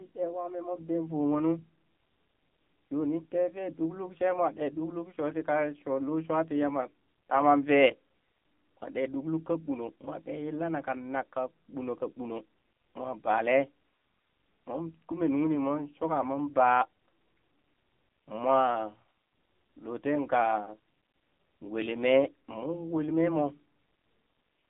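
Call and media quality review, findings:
AMR narrowband mobile codec, whole clip. Speech band limited to roughly 200 Hz to 3.5 kHz, nothing above 3.5 kHz. Heavy codec damage: buzzy, synthetic voice. Fits a low AMR-NB mode near 6.7 kbps. Component: mobile speech encoder. Mechanism: vocal-tract model excited by sparse pulses per 5 ms subframe; too few bits for natural detail.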